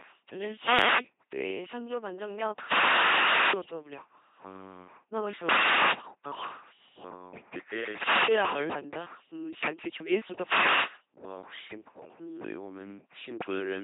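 A speech recording passed through an LPC-10 vocoder at 2.4 kbit/s, and the coding damage is heavy. The voice is resynthesised from a short all-pole vocal tract model excited by either a pulse train or noise, giving a buzzy, robotic tone with nothing above about 3.8 kHz. From 0.61 to 1.06 s there is a wireless microphone noise hit. A fade in the analogue FM radio link lets receiver noise rise, heard as a brief swish of static over the voice.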